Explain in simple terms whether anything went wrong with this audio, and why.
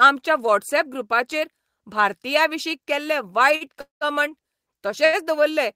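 Right after "व्हॉट्सऍप ग्रुपाचेर भारतीयांविशीं केल्ले", at 3.55 to 3.64 s, and again at 5.05 to 5.16 s, the speech briefly holds a sound too long with a slight buzz or dip. Each is a short stall from a late packet: the next piece of audio arrived late, so the last sound was stretched for about 50 and 80 ms, and nothing was lost.

From 3.81 to 4.04 s the sound turns into a fading buzz or hiss, then about 140 ms of silence, before the speech carries on where it stopped. This is a call audio freeze, likely caused by audio packets being held up on the way.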